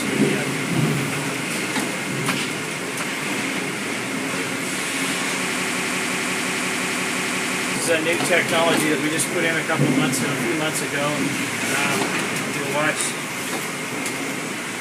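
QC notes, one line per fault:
5.56–7.76 s, broken-record loop: a 175 ms fragment repeats exactly, back to back, 12 times, and the sound that should have played there is lost. The likely cause is a stalled player or stream that kept resending its last buffered fragment.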